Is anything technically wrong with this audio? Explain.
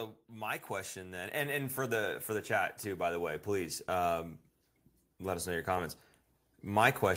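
Yes. From 0.28 s to 4.19 s the speech and the background noise swell upward together, climbing about 8 dB over nearly four seconds. This is automatic gain rising: the gain control judged the input too quiet and kept raising its level.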